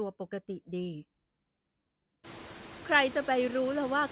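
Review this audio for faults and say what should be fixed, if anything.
Throughout the speech, the background noise sinks between phrases and swells back underneath them, most noticeably after the room noise jumps at around 2 s. These are noise suppressor artifacts: bands judged to be steady noise are pulled down by about 17 dB, frame by frame. Lowering the suppression depth, or quietening the room at the source, would prevent this.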